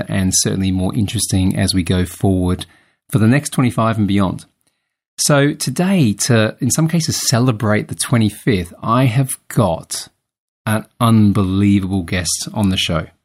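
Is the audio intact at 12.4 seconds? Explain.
Yes, the speech is intact at 12.4 seconds, with no audible fault at that moment.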